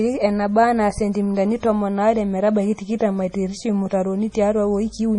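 Throughout, the speech sounds watery and swirly, likely from heavy MP3 compression around 32 kbps; a spectrogram shows a flat 10.5 kHz ceiling with flickering gaps.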